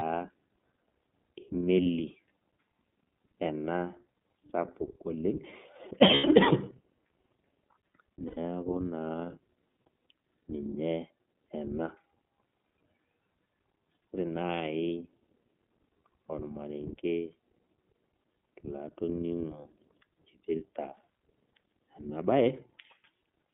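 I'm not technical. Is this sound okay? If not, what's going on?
No. The iLBC codec, heard through the whole clip, is the first problem. It is a phone-call codec that packs the speech into 30 ms chunks and keeps only a narrow slice of sound, roughly 150 Hz to 3.5 kHz. The top and bottom are cut away, so the speech sounds thin, like a phone line, and the coding leaves it plainly rough and a bit synthetic.

The second problem is lost iLBC frames, at 1.83 to 1.86 s, 6.14 to 6.25 s and 8.27 to 8.38 s. Pieces of the signal went missing: one 30 ms chunk at the first spot, and three chunks, about 90 ms, at each of the other two. The decoder fills each gap by repeating the last bit of speech mixed with noise, so you hear a brief held, buzzy or breathy sound. Because each chunk stands on its own, the speech comes back right away.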